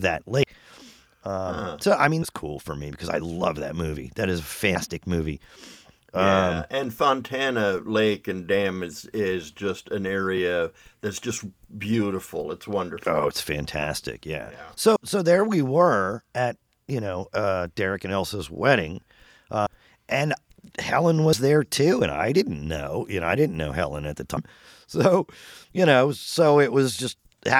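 The speech jumps forward at 0.43, 2.22, 14.96 (before "so there we were"), 19.66, 21.33 (before "there too and I") and 24.37 s (after "at the"). Each jump drops roughly 70 to 300 ms of audio. These are compressed frames skipped: whole frames, which fits a 32 ms frame length, were lost or rejected by the decoder.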